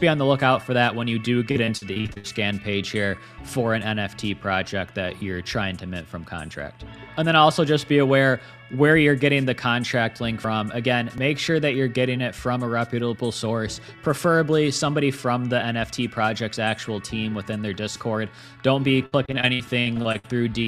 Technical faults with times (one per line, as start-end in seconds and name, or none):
1.51-2.26 repeated packet loss (robotic sound)
5.18-5.21 chunks out of order
19.06-20.26 repeated packet loss (robotic sound)